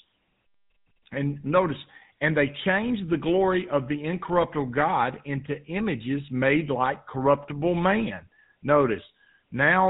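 Speech with a plainly audible buzzy, gravelly roughness throughout and nothing above 4 kHz, the sound of the GSM full-rate codec. It models the vocal tract and drives it with regularly spaced pulses, keeping only every third excitation sample, which fits a 13 kbps stream.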